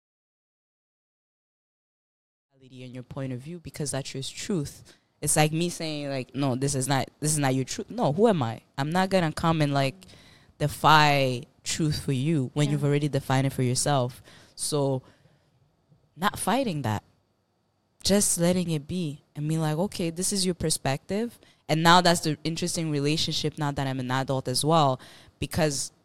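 Speech recording with no technical faults; the level comes up in a smooth fade-in from around 2.5 s, reaching full level at 3.41 s with no click or hard edge.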